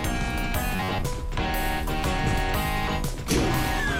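From 0.76 to 1.10 s the sound turns into a rigid, metallic buzz at 93.8 Hz. This is robotic sound from repeated short buffers. Roughly half the audio is likely replaced by repeats of an 11 ms block.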